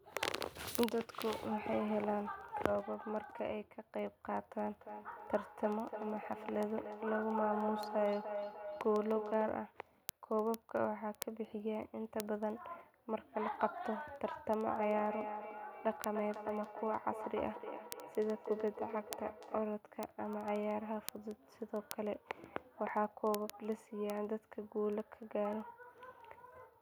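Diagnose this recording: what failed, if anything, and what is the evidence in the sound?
A sharp, single-sample tick runs through the whole recording, from 0.15 s to 26.81 s. It comes at a steady rate of roughly fourteen per second, about one every 70 ms, and adds up to several hundred over the clip. These are word clock ticks at the converter or digital interface stage. The receiving device runs on its own clock, not locked to the sender's, and the two differ by a few hundred parts per million. Each time they slip, one sample is dropped or repeated.

From 4.71 to 9.78 s and again from 14.78 to 19.85 s, the speech comes back at an interval of roughly 300 ms. Each return sounds thinner and more ringing than the last. The loudest repeat reaches about 7 dB below the speech in the first stretch and about 8 dB below it in the second. This is feedback echo between two devices, a call-processing failure. 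Two endpoints in one room share the call, and each microphone picks up the other's loudspeaker. Each device's echo canceller removes only its own playback, so the loop goes around uncancelled.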